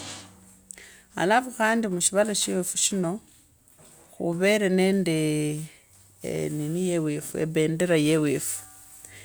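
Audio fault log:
Nothing stood out on listening to this speech recording.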